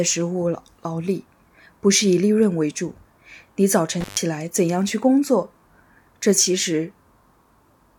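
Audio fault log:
4.01–4.20 s, intermittent contact: sound cuts out for 130 ms with crackle at both edges, a loose cable or plug briefly opening and reconnecting.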